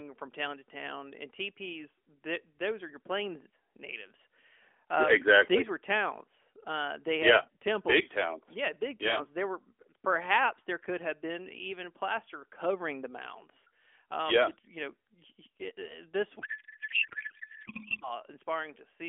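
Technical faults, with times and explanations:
16.40 to 18.10 s: codec payload misread. For about 1.7 s the speech on this narrowband AMR line turns into garbled noise and warble that barely tracks it. The decoder is reading frames with their fields shifted, which points to octet-aligned packing being read as bandwidth-efficient.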